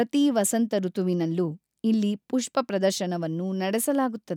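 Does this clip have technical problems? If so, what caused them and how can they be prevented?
No, nothing in this one sounds off, so there's nothing that needs fixing or preventing here.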